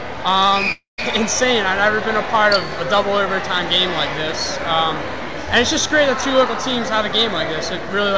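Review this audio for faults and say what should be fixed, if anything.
Long network dropout, 0.72 to 1.00 s: the sound breaks off and is replaced by a continuation of the last sound, a buzz that fades away, leaving about 0.14 s of silence before the audio returns with roughly a quarter second lost. This is likely a stall in packet delivery, with the receiver concealing the gap rather than playing real audio. The call path is G.722 at 64 kbps with nothing above 8 kHz. Preventing it means giving the call a steadier network route with less congestion, or adding redundancy or retransmission so short outages can be recovered.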